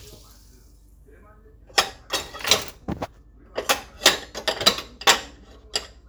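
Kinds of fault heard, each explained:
Mains hum: a steady low tone at 50 Hz runs under the sound from start to finish, the signature of power-line energy leaking into the signal path through a ground loop or the field of a nearby transformer. It sits roughly 30 dB below the wanted material, and it stays constant in pitch and level rather than following the content.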